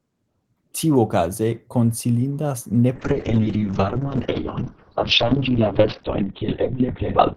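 From 2.96 s to the end, a call bitrate drop takes the speech from 32 kbps to 7 kbps and narrows the band from 20 kHz to 4 kHz. It sounds muffled and watery, worst for about 2.4 s, but continuous, without packet loss's gaps.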